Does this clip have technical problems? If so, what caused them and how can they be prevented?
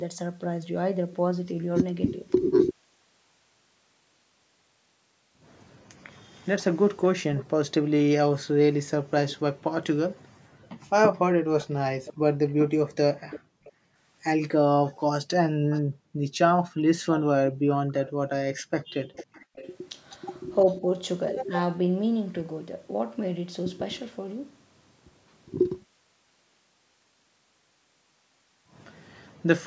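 Yes. Echo leak: the far end was likely playing the call on a loudspeaker, and its echo canceller failed to remove everything its microphone picked up, so that residue came back down the line. A delayed, faint copy of the talker trails the original from 7.02 to 9.37 s, lagging by 453 ms at about 15 dB down, and again from 11.58 to 20.74 s, lagging by 501 ms at about 20 dB down. Using a headset at the far end, or lowering its loudspeaker volume, would keep the echo path from forming.

Background gated by the echo canceller: while its loudspeaker was active, the canceller clamped the microphone down hard, and the room sound sinks and then recovers when it releases. This happens between 9.01 and 11.48 s (about a second in total), 13.4 and 13.96 s (about half a second), and 15.51 and 18.2 s (about a second), each dropping by up to about 40 dB, and again from 29.28 to 29.46 s by about 32 dB. 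Better-tuned suppression, or a headset that removes the need for heavy gating, would prevent these holes.

Speech suppressed in double talk: between 19.4 and 20.83 s both sides were likely talking at once, and the canceller, unable to separate its own talker from the loudspeaker echo, turned everything down. The voice dips by roughly 10 dB in brief bites that add up to about 70 ms. An echo canceller with proper double-talk detection, or a headset at the far end, would avoid this.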